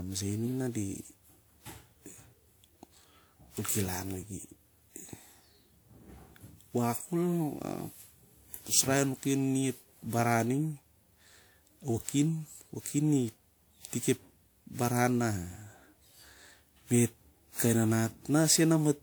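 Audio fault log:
throughout: generation loss. The speech sounds swirly, hollow and smeared, with blurred attacks. Likely around ten passes of WMA re-encoding, each stacking fresh quantisation noise.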